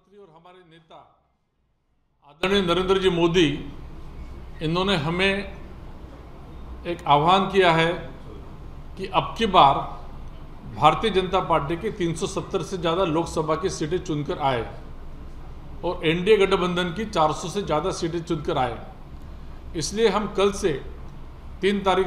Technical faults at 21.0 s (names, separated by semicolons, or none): none